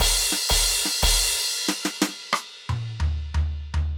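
Dropped buffers at 1.51 s and 2.50 s in this music make it jump ahead, losing a few milliseconds and then around 15 ms, likely because buffers were overwritten before being read.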